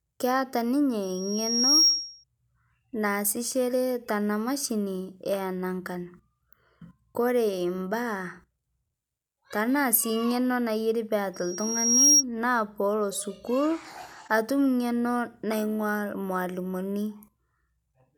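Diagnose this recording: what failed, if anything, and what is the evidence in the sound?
Loudspeaker feedback squeal, mic-to-speaker loop: at 1.02–2.24 s and 11.34–12.24 s, loop gain above one swells a 5.6 kHz tone within a second, a bright horizontal spectrogram line.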